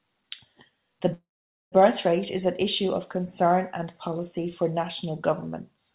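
From 1.13 to 1.75 s, a fading buzz then silence before the sound resumes intact: a call audio freeze, likely delayed packets emptying the jitter buffer.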